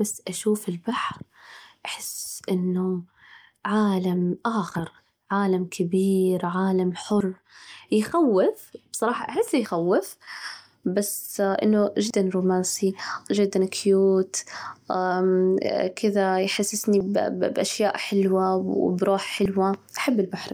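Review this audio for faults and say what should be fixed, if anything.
The speech skips abruptly at 2.30, 4.75, 7.20, 9.65, 12.10, 17.00 and 19.45 s. Each time, about 50 ms vanishes and the two sides butt together without a gap. This is likely audio missing between chunks, lost as roughly 2.5 s blocks are closed and the next one opened. To prevent it, buffer continuously across chunk boundaries so that no samples are dropped during the handover.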